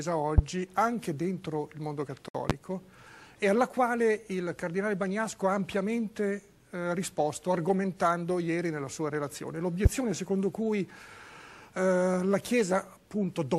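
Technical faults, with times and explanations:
0.38 s, 2.50 s and 9.85 s: loud pop. Each is a single sharp pop, about 30 ms long and roughly 20 dB above the surrounding sound, which keeps going underneath without a break. That's the signature of a sudden voltage step or spike landing on the signal, likely from a plug, switch, static discharge or driver glitch. The downstream circuitry rounds the spike into a short, punchy click rather than a clean tick.
2.28–2.35 s: gap at a join of encoded pieces. The sound just stops for about 62 ms, then picks up exactly where it left off. Two separately encoded chunks were stuck together without trimming, so the first chunk's padded last frame and the second chunk's encoder start-up delay both survive as silence. The codec smears the cut edges, so the fully silent stretch is shorter than that.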